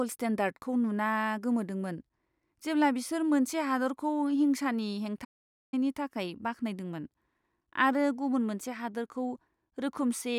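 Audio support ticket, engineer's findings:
Playback stall, 5.24–5.74 s. Speech cuts out mid-flow; output silent for about 480 ms, then resumes. Probable component: player output path. Mechanism likely buffer underrun or blocked playback thread starving the output until data returned. Check buffer depth, thread scheduling.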